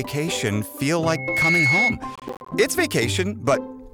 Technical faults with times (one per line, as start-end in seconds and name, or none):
1.05-1.98 loudspeaker feedback squeal
2.15-2.52 processor overload crackle